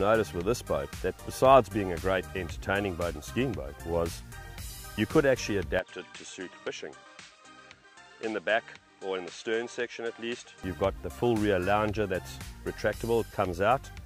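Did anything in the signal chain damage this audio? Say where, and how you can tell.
Yes. From 5.79 to 10.64 s the sound turns dull and a few dB quieter, with nothing above 8.6 kHz and a new, low noise floor, with no gap at either switch. The input likely switched to a poorer device at the driver stage, bringing its narrower band, level and noise.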